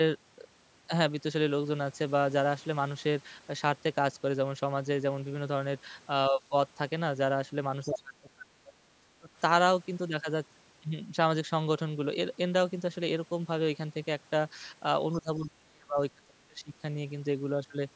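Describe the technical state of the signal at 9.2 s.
At 9.2 s the speech is near the end of a stretch of speech suppressed in double talk, running from 7.85 to 9.29 s. The level ducks in pieces, about a second in total, sinking as far as roughly 30 dB down. The likely cause is an echo canceller that, with both sides talking at once, could not separate this talker from loudspeaker echo and attenuated both. Unlike a packet-loss dropout, the sound fades and returns without clicks, repeats or robotic concealment artefacts.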